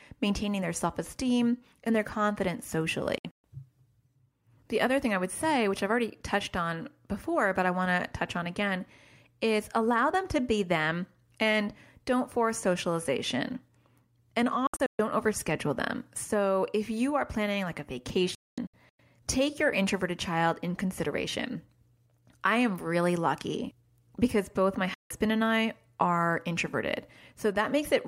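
Speech with digital broadcast dropouts at 3.18–3.44, 14.67–15.0, 18.35–19.0 and 24.94–25.11 s: the receiver mutes on bad frames, leaving short clustered silent holes where that audio is lost.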